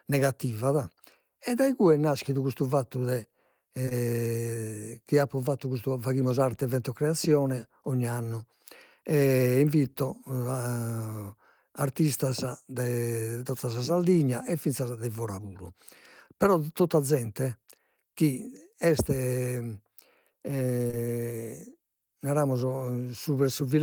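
At 3.85 to 3.89 s and again at 3.89 to 3.93 s, two consecutive 20 ms stretches of the speech stream failed to reach the decoder in time. This is short concealed packet loss: the receiver bridged each gap by extending the preceding sound, for about 15 and 16 ms, before easing back into real audio. The same double loss recurs at 20.87 to 20.91 s and 20.91 to 20.95 s, with fills of about 25 and 17 ms. Each pair is heard as a quick smear or wobble where detail briefly blurs.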